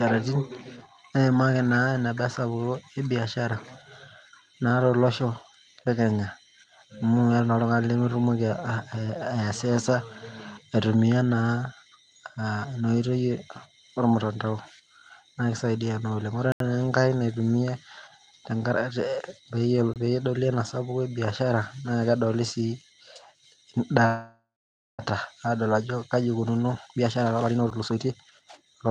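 At 16.52 s the speech drops into a block of digital silence lasting about 82 ms, until 16.60 s. The sound cuts out and returns with no fade, and the gap is heard as a short hole. At 19.94 s a second block of digital silence lasts about 23 ms. Its length fits a 1024-sample buffer that was not filled in time.

From 24.06 s to 25.02 s there is a call audio freeze. The last sound carries on as a fading buzz or hiss, then about 530 ms of near silence follows. The likely cause is delayed packets that left the jitter buffer empty. When the audio resumes it continues from where it stopped. Nothing is lost, but about 930 ms of extra delay has been added.

From 26.11 s to the end, a jitter buffer speed-up takes hold. The receiver is shedding the backlog by cutting short pitch-period pieces, again and again. The speech runs at about 130 percent speed. The pitch does not change, but delivery sounds hurried. 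Inside this stretch, at 27.71 s, a very brief block of digital silence of about 8 ms gives a single tick. Throughout, the Opus call path limits the top end to about 12 kHz.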